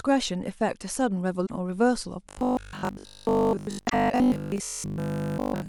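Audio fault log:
1.43–1.51 s and 3.85–3.94 s: damaged data in a compressed stream. Each is a brief glitch about 80 ms long, as the decoder misreads corrupted frames and resynchronises. Unlike the buzz, these are isolated blips with no steady pitch.
2.29–5.68 s: robotic sound from repeated short buffers. The speech turns into a rigid metallic buzz locked at 50 Hz, most likely because audio arrived too seldom and the last 20 ms was replayed for most of that stretch. It persists continuously rather than as brief blips.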